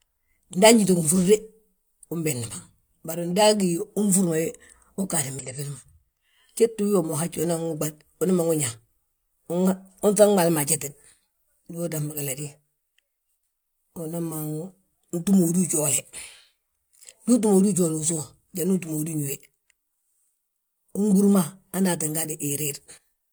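At 5.39 s the speech breaks into a brief disruption that lasts until 5.45 s, about 60 ms. This is damaged data in a compressed stream. A short stretch of the encoded bytes was wrong, so the decoder could not read those frames correctly. It lost its place and had to search for the next valid frame header before normal decoding resumed. The result is a short break in the flow of the speech.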